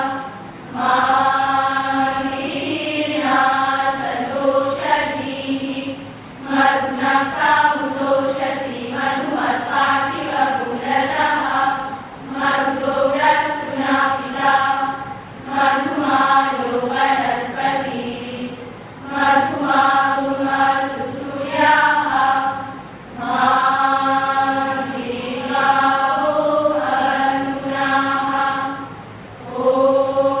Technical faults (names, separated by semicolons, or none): none